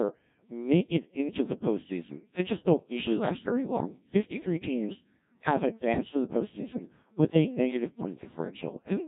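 Speech, heavily degraded from start to finish by the Codec 2 vocoder. The voice sounds robotic and buzzy because the decoder rebuilds it from sine waves driven by pitch, voicing, energy and a spectral envelope rather than carrying the waveform itself, and the coarseness points to a very low rate of around 1.3 kbit/s. Unlike the swirling, watery artefacts of an ordinary lossy codec, this is synthetic resynthesis: the timbre is replaced, not smeared.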